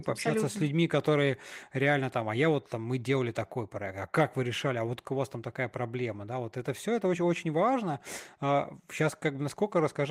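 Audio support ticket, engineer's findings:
Went through the speech recording and found nothing to flag on our side, so no action needed here.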